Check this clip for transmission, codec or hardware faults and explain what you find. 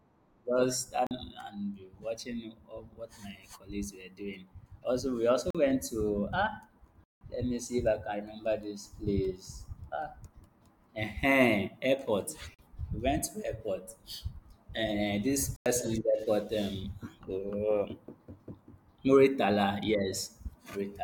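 The speech is interrupted five times by a block of digital silence: at 1.07 to 1.11 s, 5.50 to 5.55 s, and 12.54 to 12.59 s (each 42.7 ms), at 7.04 to 7.21 s (170.7 ms), and at 15.56 to 15.66 s (95.6 ms). In each case the output buffer was likely not filled in time and went out as zeros. The 42.7 ms holes fit a 2048-sample buffer at 48 kHz, and the 170.7 ms one fits four such buffers. The sound stops dead and restarts with no fade, and the longer ones are heard as short holes. A concealed packet loss would instead be smeared or faded over, not left as true silence.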